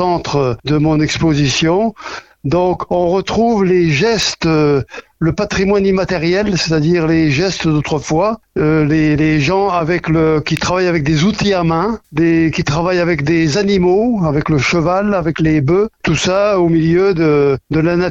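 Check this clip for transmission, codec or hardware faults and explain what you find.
Two brief electrical switching spikes appear, at 4.22 s and 10.57 s, each a sharp snap peaking around -5 dBFS, likely from a nearby switch arcing onto the line. On a waveform they show as isolated vertical spikes; a spectrogram shows thin full-band lines.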